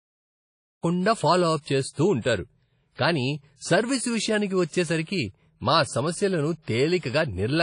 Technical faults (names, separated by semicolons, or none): WMA compression; pre-echo